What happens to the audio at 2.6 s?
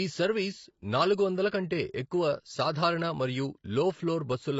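At 2.6 s the speech is dull and smeared, as it is across the whole clip. Nothing sounds above 7.5 kHz. Sibilants have a fizzy, warbling texture. The likely cause is heavy AAC compression, consistent with AAC-LC near 24 kbps, which discards high frequencies and coarsely quantises the rest.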